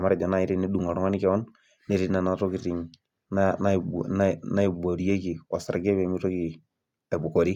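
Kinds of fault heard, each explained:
No technical faults can be heard in this speech recording. Nothing in the sound points to a fault anywhere in the recording.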